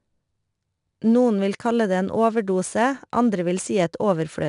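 From start to end, the speech carries plainly audible 4-bit ADPCM compression. Each sample is stored as a coarse step from a prediction. The resulting error becomes a gritty hiss that tracks every loud passage. Nothing sounds above 10.6 kHz, which points to roughly 89 kbps.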